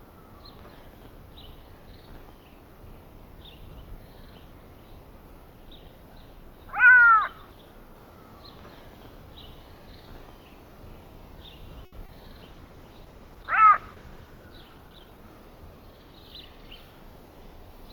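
At 11.85 s a short stall from a late packet begins and runs to 11.94 s. A packet did not arrive on time, and the jitter buffer ran dry. The receiver held the last sound for 70 ms until the packet came, then carried on from the same point. Nothing is lost. The sound simply hangs too long, with a faint buzz or dip. The delay grows by 70 ms here.

From 12.06 to 12.11 s there is a short concealed packet loss. Twenty milliseconds of audio never reached the decoder in time. The receiver covered the gap by extending what it had last heard, then blended back into the real signal. The result is a brief smear or wobble. Those 20 ms of sound are gone, replaced by the fill, and the blend adds only a sliver of extra length.

At 12.49 s a call bitrate drop sets in and lasts until 16.07 s. The bandwidth estimate fell, so the encoder cut its rate from 32 kbps to 12 kbps. It held that low rate for about 1.8 s. 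At 12 kbps the coding is much coarser, and the top end is trimmed. The sound turns rough and muffled, then clears as the rate climbs back.

Inside that stretch, from 14.61 to 15.42 s, a jitter buffer speed-up occurs. Too much audio had piled up in the buffer, so the receiver trimmed it. It removed small pieces, each a pitch period or a few, over and over, about 70 ms in total. Playback runs at 108% speed with the pitch unchanged. It sounds slightly hurried.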